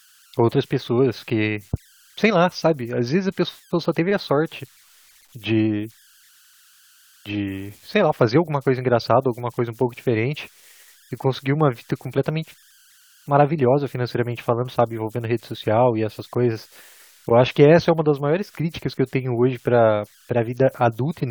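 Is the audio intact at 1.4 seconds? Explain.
No. At 1.4 seconds, as throughout the clip, an idle tone around 1.5 kHz sits in the pauses as whistles, buzzy chirps or rough hiss and turns to grainy noise under quiet speech, about 34 dB below the signal. These are converter idle tones: an undithered delta-sigma converter locks into repeating bit patterns on small inputs.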